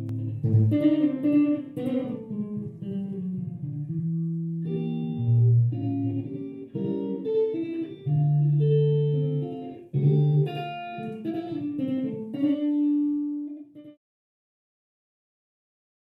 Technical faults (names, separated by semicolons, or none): channel delay (doubling)